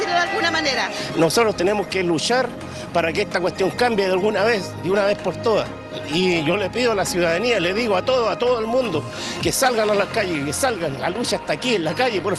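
Nothing technically wrong can be heard in this audio.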